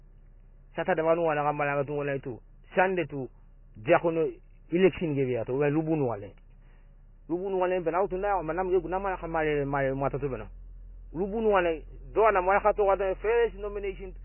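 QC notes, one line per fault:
Throughout, MP3 compression: speech is dull with nothing above 3 kHz and sounds heavily watery, likely a 16 kbps encode starving bits.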